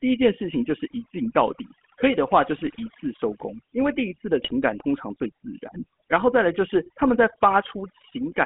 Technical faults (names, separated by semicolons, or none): overdone noise removal; GSM full-rate codec; GSM bit errors